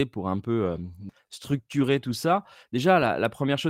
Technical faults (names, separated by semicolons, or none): call bitrate drop